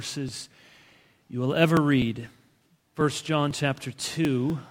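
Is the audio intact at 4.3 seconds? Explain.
No. Periodic USB or driver dropouts run from 0.29 to 4.5 s, skipping roughly 2 ms every 0.248 s. Unlike random glitches, the ticks are evenly spaced and sound only over signal.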